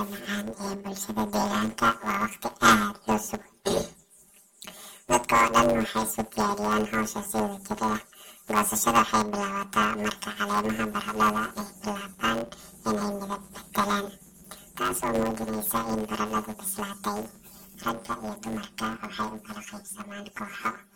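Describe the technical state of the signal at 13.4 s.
At 13.4 s the speech has the planar audio read as interleaved fault that runs through the whole clip. Each 10 ms block's left and right halves play back to back at double speed, causing a robotic 100 Hz buzz. Unlike simple double-speed playback, pacing stays normal with no clear octave jump.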